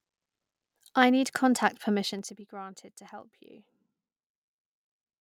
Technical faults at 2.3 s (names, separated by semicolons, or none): zipper noise